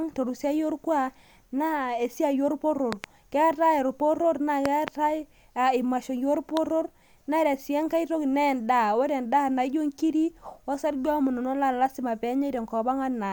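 Loud pops cut into the speech three times here. A quick double pop lands between 2.93 and 3.06 s, another pair spans 4.66 to 4.90 s, and a single sharp pop hits at 6.57 to 6.59 s, each peaking at about 15 dB above the speech, which carries on underneath. That's likely a voltage spike from a plug, switch, static or driver glitch, briefly shaped by the downstream circuitry into a thump.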